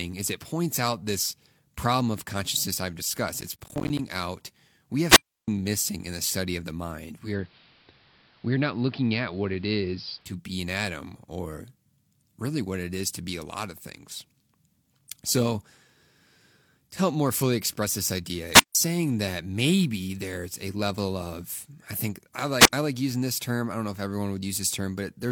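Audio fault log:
3.41–3.99 s, processor overload crackle: just after "of consciousness I've discussed", the speech breaks into a gritty, tearing crackle for a little over half a second before "out we" comes through. The sound points to roughly twenty missed deadlines in a row on buffers of about 10 ms, each late buffer replaced by a hard-edged slice of silence. Unlike a radio dropout there is no hiss and no fade, only rapid clicks riding on the sound until the load clears.
5.05–5.48 s, 18.52–18.75 s, 22.59–22.73 s, wireless microphone squelch dropout: each time the radio link fades, static rises briefly and then the receiver's squelch mutes the output. The holes of near silence last about 319 ms, 155 ms and 76 ms. The second comes after "fully express this idea" and the sound returns on "saying that maybe there's". What separates these from processor crackle is the single clean mute preceded by a swell of noise, rather than a dense chatter of tiny gaps.
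7.15–10.4 s, digital radio blending to analogue: after "study of the mind" the sound cross-fades over about 206 ms into the station's AM broadcast and later blends back before "an atom or". Hiss sits about 35 dB below the signal, and the level stays unchanged. Unlike a squelch dropout the sound never disappears, only its bandwidth and noise floor change.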